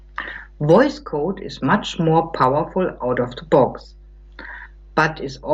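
Mains hum runs through the whole speech clip: power-line current leaking in through a ground loop or nearby transformer, heard as a steady 50 Hz drone roughly 25 dB below the speech.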